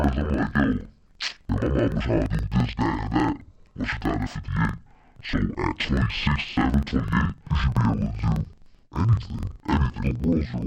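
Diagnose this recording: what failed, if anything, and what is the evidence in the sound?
Interleaved audio read as planar at sample-format conversion: the speech is an octave low, doubled and chopped at 23.4 Hz, yet keeps normal pace, unlike a sample-rate mismatch.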